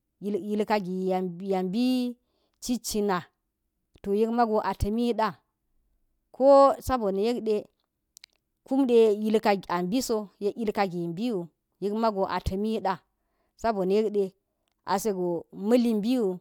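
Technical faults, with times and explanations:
Nothing technical stands out here; the recording comes across without any faults worth flagging.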